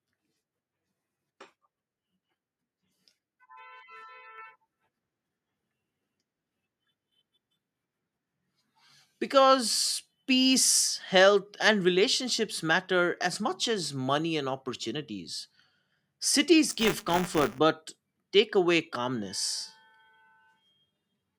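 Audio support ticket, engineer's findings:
Microphone volume stepped up at 4.38 s: speech and room tone jump together by about 4 dB in one step. Probable component is the call app's auto input gain, raising the mic device level rather than processing the signal.

Buffer tearing from 16.70 to 17.59 s, right before "but take away calmness": a robotic 200 Hz buzz present only under speech. Likely playback ring-buffer pointers crossing, so roughly 5% of each 5 ms period holds audio about 20 ms old.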